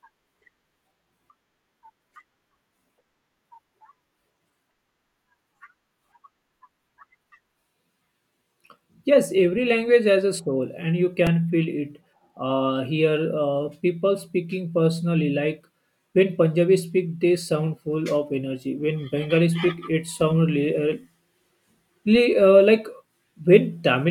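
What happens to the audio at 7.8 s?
Nothing goes wrong at 7.8 s: the speech continues intact through that moment, with no dropout, click, distortion or other fault to be heard.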